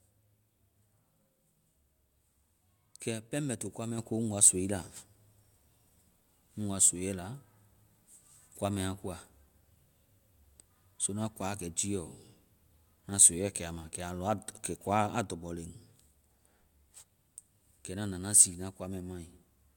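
Speech recording, no technical faults detected.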